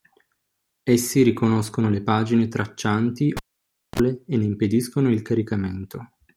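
At 3.37 s the cable is pulled and plugged in. A pop, 0.58 s of near silence, 36 ms of 60 Hz mains buzz as the tip touches, then another pop.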